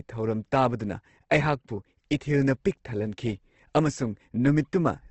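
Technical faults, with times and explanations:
Throughout, Opus compression: the speech is grainy and rough, with nothing above 8.2 kHz. Likely Opus music mode, fitting roughly 16 kbps.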